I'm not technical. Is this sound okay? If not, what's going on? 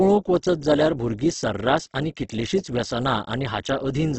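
No, not quite. All the way through, the speech sounds grainy and rough, and nothing above about 8.2 kHz comes through, so it's dull. That's heavy damage from squeezing the file down hard, most likely Opus compression at a very low setting.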